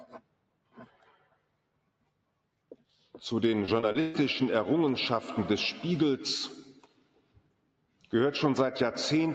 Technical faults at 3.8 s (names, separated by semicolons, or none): noise suppressor applied to music or sounds; repeated packet loss (robotic sound)